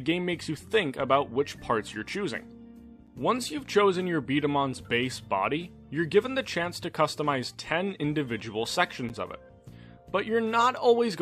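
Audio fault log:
3.07 s and 9.09 s, gap between stream segments: hard-edged silent holes of 8.2 and 9.6 ms, six seconds apart, where segment timestamps leave space filled with silence.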